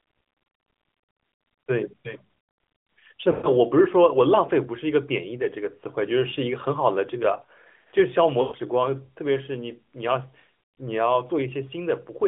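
At 3.32 to 3.49 s, and again at 8.42 to 8.56 s, there are lost AMR speech frames. Each gap is about 120 ms, which fits a run of six 20 ms frames failing their checks. The decoder fills the hole by repeating the last good pitch and vocal-tract shape while ramping the gain down. You hear the speech smear and stretch, then sag toward silence, and come back a bit thin for a moment.

From 9.44 to 10.89 s there's a loudspeaker feedback squeal. A single tone at 5.2 kHz swells over roughly a second until it sits a few dB above the speech. The mic is picking up its own speaker, and at that one frequency the loop gain tops one, so it keeps feeding itself until the loop breaks. Underneath everything is the band-limited AMR-NB phone sound, with only light codec coloration.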